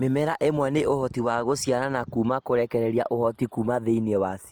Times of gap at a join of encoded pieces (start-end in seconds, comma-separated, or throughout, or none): none